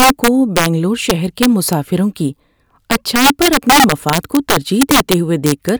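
Integer overflow runs through the whole speech clip. The signal was pushed about 5 dB past full scale, and the arithmetic wrapped instead of limiting. So each peak that crossed the maximum flipped to the opposite extreme of the range. Around two percent of samples are affected. Those land on the loudest moments of the speech. Each one is a violent crack, far sharper and harsher than ordinary clipping.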